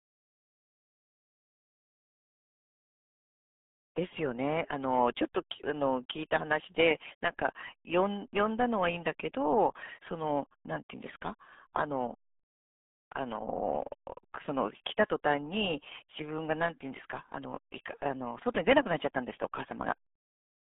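Speech runs through the whole clip with the heavy damage of the RealAudio 14.4 codec, a speech coder built for dial-up modems. The muffled, gargly quality fits a rate of about 8 kbit/s. The band sits between roughly 150 Hz and 3.5 kHz, so a spectrogram shows a hard ceiling with empty space above 3.7 kHz and thin lows, plus smeared, blotchy harmonics. The waveform looks coarse and dull throughout.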